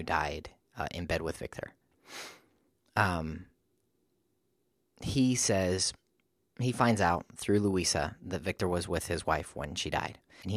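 Near the very end of the speech, from 10.39 to 10.44 s, a brief disturbance of about 56 ms marks damaged data in a compressed stream. A stretch of the coded bytes was corrupted, so the decoder misread those frames, lost sync and hunted for the next valid frame header.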